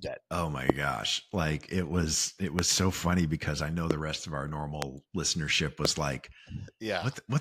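Sharp single loud pops jump out well above the speech, by roughly 20 to 25 dB, at 0.70–0.72 s, at 2.59–2.61 s after "it was it", at 3.91–3.93 s after "funny because I know", at 4.82–4.84 s after "rest of our", and at 5.85–5.87 s. The talking carries on underneath. Each is likely a brief voltage spike, perhaps from a switch, static or a driver glitch, added onto the signal.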